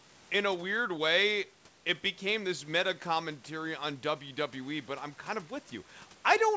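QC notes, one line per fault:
No faults to note.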